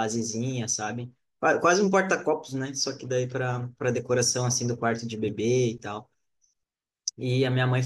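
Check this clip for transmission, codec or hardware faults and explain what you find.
No transmission, codec or hardware fault can be heard anywhere in the speech signal, which has no breaks or intrusions.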